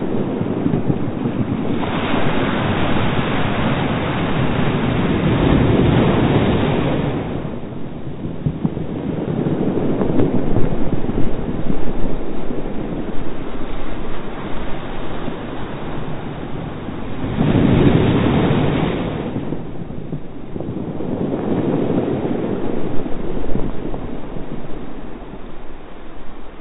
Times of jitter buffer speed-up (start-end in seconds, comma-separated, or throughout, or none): none